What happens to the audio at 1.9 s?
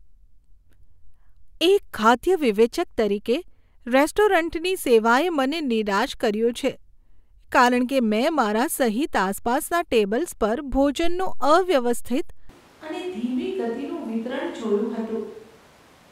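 At 1.9 s the speech carries on cleanly, with no dropout, click, distortion or other fault to be heard at that moment.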